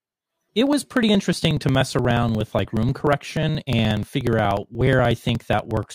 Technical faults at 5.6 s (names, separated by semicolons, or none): periodic USB or driver dropouts